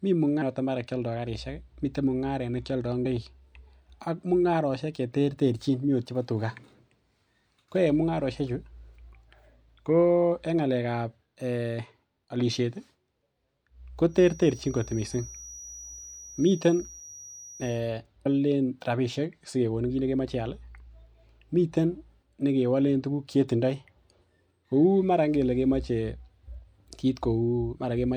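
Speech with two kinds of trouble. There are compressed frames skipped at 0.41 s (just before "mara kialdo"), 3.05 s, 17.0 s and 18.25 s. Each is a point where the audio jumps ahead, losing roughly a fifth, a tenth, a tenth and four tenths of a second. The jumps fit a frame length of about 26 ms. From 14.06 to 17.83 s there's a thin, slightly wavering whistle at 5.8 kHz, sitting around 20 dB under the speech. That's likely a feedback whistle, with the speaker-to-mic loop hovering just short of runaway.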